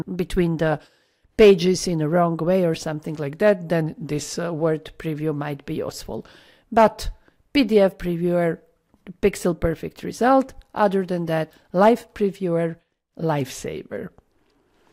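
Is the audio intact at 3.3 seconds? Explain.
No, a drift correction step runs from 3.23 to 4.60 s. The likely cause is clock-matching software lowering the playback rate in one jump to rebalance its buffer, so the audio slows about 6% and drops roughly a semitone before snapping back.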